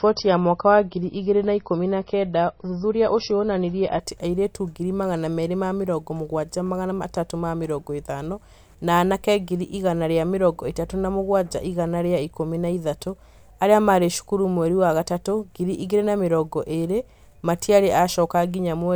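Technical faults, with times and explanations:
0.0 to 4.0 s, adaptive stream starting at a low bitrate: the opening is dull and smeary, with nothing above about 5.9 kHz and stronger codec swirl, which fits a low-bitrate MP3 around 24 kbit/s. The player picked a cheap version to start fast, then stepped up to something closer to 128 kbit/s once it had measured the connection. Right at "atĩ airĩtu ngiri magana" the treble and clarity jump back in, with no gap.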